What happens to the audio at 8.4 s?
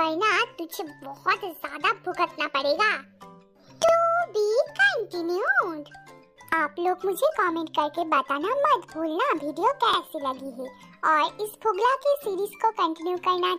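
Nothing goes wrong at 8.4 s: the audio runs through that point without any dropout, glitch or distortion.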